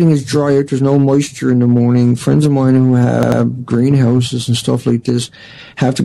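At about 3.23 s there's a stutter from repeated frames: the same short chunk of compressed audio got written or sent more than once, so the decoder plays it again. Here a 92.9 ms block is heard three times in a row, which points to a single frame being played twice extra. That runs until about 3.42 s and makes the clip 185.8 ms longer than it should be, with the sound briefly hiccuping in place.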